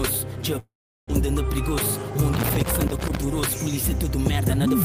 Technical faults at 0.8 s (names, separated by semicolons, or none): long network dropout